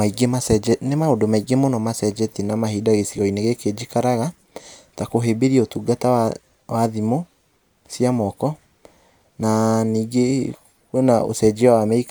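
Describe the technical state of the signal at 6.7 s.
At 6.7 s the speech signal is intact, with no fault audible at that moment.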